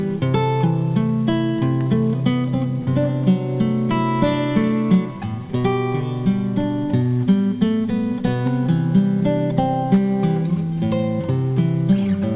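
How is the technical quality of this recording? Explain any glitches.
No glitches to explain: the audio comes through a call path with nothing above 4 kHz, a narrowband ceiling that fits G.711 A-law at 64 kbps, and nothing in it departs from that.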